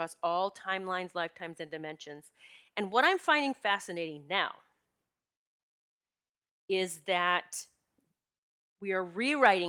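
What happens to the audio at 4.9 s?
Nothing goes wrong at 4.9 s; the speech runs straight through that point without any dropout, click, distortion or other disturbance.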